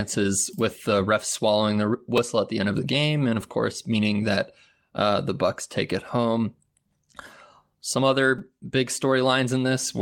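At 2.18 s, just before "at the end of", and again at 8.39 s, a repeated buffer plays a tiny slice of speech twice and then three times extra, a length that fits a 5 ms buffer. Each is heard as a brief buzzy click. The waveform shows identical copies butted together with hard joins, and the spectrogram shows a thin vertical stripe.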